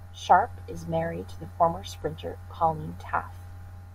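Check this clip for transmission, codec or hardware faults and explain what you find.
No transmission, codec or hardware faults are audible anywhere in this speech clip.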